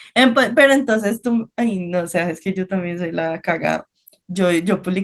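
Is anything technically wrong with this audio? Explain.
No, the speech comes through as ordinary Opus voice coding, with the full audio band kept and only the light coding texture that fits a rate of about 20 kbps.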